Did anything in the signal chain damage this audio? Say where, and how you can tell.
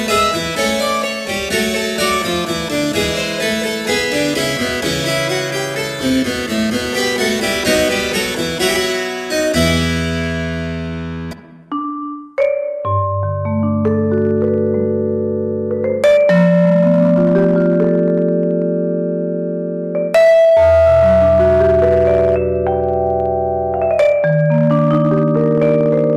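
Yes. Hard clipping runs through the whole recording: the level was driven about 8 dB beyond what a converter or fixed-point format could pass, so roughly 3% of samples hit the ceiling. Peaks crackle harshly, the waveform shows flat-topped plateaus, and a spectrogram shows bright broadband streaks above the fundamentals.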